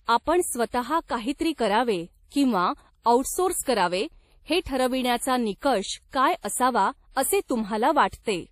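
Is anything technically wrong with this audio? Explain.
Yes. Throughout the speech, nothing sounds above 15.2 kHz, and two different kinds of coding damage are heard together. That points to transcoding between lossy codecs, likely a low-rate MP3 pass, around 40 kbit/s, re-encoded to WMA 1 at about 64 kbit/s. The second encoder wasted bits preserving the first one's artefacts and added its own. A single codec would leave one consistent artefact character, not two overlapping ones.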